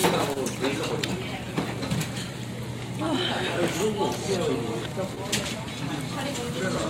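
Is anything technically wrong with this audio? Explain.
Yes, the recording of everyday sounds has timing faults from a receiver stuck with a mismatched clock.

Clock drift between sender and receiver runs through the whole clip. The sender's clock is slower by roughly 1.5 percent, so the receiver's buffer keeps draining and must pad the stream. This produces small, unevenly spaced timing hiccups throughout.

A short stall from a late packet occurs from 0.33 to 0.38 s. The buffer ran empty and the receiver held the last sound for 22 ms until the packet arrived. Nothing is lost, but that moment hangs slightly too long, with a faint buzz or dip.

Repeated timing corrections run from 1.38 to 2.32 s, where the receiver repeatedly repeats short pieces to keep pace with the slow sender. Playback in that stretch runs at 97 percent speed, adding about 40 ms in total.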